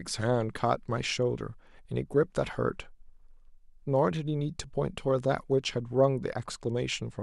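A speech recording with no audible technical faults in its signal.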